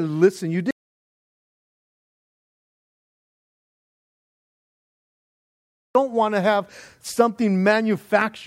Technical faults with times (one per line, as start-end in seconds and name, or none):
0.71-5.95 audio dropout to silence